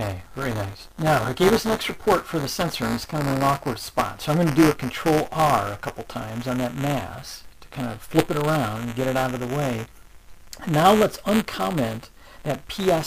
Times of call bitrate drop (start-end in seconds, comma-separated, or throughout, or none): none